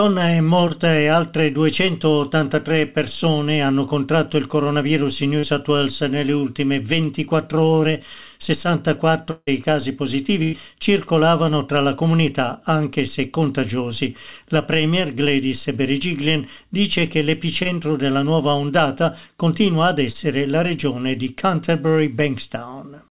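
At 0.68 to 0.71 s there is a short concealed packet loss. About 20 ms of audio is missing, and the receiver covers roughly 14 ms of it by extending the preceding sound before blending back into the real signal. The result is a brief smear. The same fault recurs at 5.39 to 5.45 s, where a 40 ms hole gets 36 ms of concealment. It appears again at 17.63 to 17.67 s and 20.13 to 20.16 s, each with about 20 ms missing and 19 ms and 17 ms filled respectively.

From 9.31 to 9.49 s the sound continues artificially for about 159 ms, decays, and includes about 40 ms of silence. The audio then resumes further on, with roughly 160 ms never heard. The cause is likely a long network dropout: nothing arrived for that stretch, so the receiver synthesised a continuation of the last sound until it faded out.

At 10.43 to 10.55 s comes a burst of packet loss. About 100 ms of packets were lost or arrived too late to play, and the receiver filled 98 ms by holding the last sound while lowering its level. 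It is heard as a held buzz or fading hiss, depending on what preceded the gap. The audio then picks up past the missing section.

Throughout, the clip has no content above 4 kHz, which points to a narrowband call codec such as G.711 mu-law at 64 kbps.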